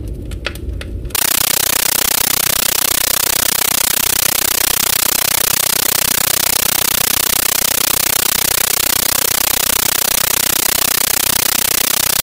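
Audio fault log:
1.15 to 12.23 s, compressed stream played as audio: the sound gives way to loud, chattering static. Bursts of noise last about 13.3 ms and repeat 31.25 times a second, with silence between. This fits an undecoded 640 kbps AC-3 stream treated as ordinary samples.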